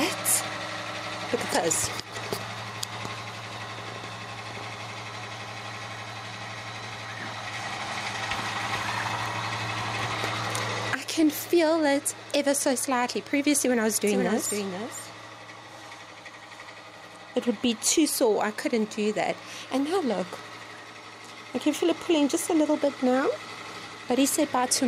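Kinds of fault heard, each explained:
Gain pumping: The level keeps breathing all the way through. The level gets yanked down the moment something loud arrives, with a swing of something like 15 dB. Loud and quiet parts sit unnaturally close together, so everything feels squashed. The likely cause is input gain set far too high, with a fast limiter or compressor clamping down on each loud sound.
Doubled audio track: From 14.07 to 15.91 s a second, full-band copy of the same audio trails about half a second behind, sitting roughly 10 dB under the original. It's a clean, dry copy with no tail or room sound, and it switches on and off abruptly at those edges. Most likely the sound got captured twice through a slower path, or an edit left two out-of-step copies overlapping.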